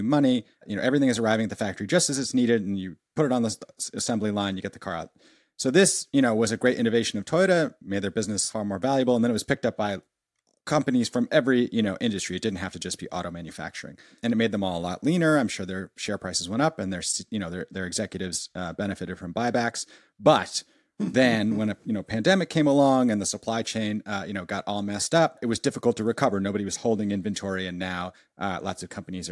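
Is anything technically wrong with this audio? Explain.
No, nothing is technically wrong with this audio.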